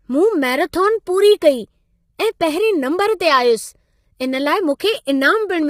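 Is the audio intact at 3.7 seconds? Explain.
No, at 3.7 s the speech carries heavy low-delay AAC compression, present throughout, likely AAC-ELD at a low bitrate near 24 kbps. Its short frames resolve harmonics poorly, so the voice sounds rough and grainy. A spectrogram shows smeared harmonics with noise between them and nothing above 15.7 kHz.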